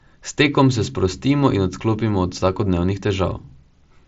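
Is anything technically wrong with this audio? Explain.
No, nothing is technically wrong.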